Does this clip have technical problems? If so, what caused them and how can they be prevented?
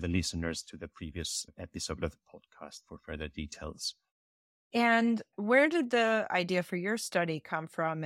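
No, nothing in this speech recording points to a technical fault, so there is no cause to trace and nothing to prevent.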